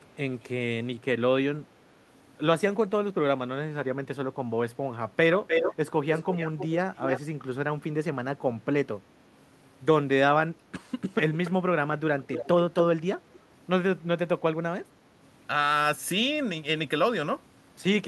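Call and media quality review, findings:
Echo leak: delayed copy of the speech returns in scraps at 0.03–0.13, 5.47–5.75, 6.13–6.67, 6.94–7.2, 11.01–11.06, 11.45–11.51, 12.2–12.48 and 12.77–12.83 s. Likely cause: far-end loudspeaker pickup the echo canceller failed to cancel. Delay 376 ms at the first event, then about 300 ms (304, then 291 ms). Level ranges from barely audible at the start to roughly equal to the speech near 5.5 s. Spectrogram: duplicate harmonic stacks offset by that lag. Waveform: short bursts trailing speech segments.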